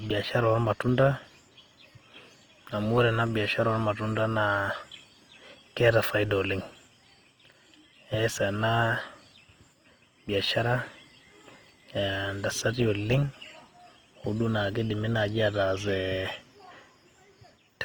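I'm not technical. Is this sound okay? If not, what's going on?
No. From start to finish the speech sounds grainy and rough, likely from Opus compression squeezing the audio hard to save space. Unlike MP3 damage, it swirls less, and the crisp high end is still there. It just turns gritty and noisy.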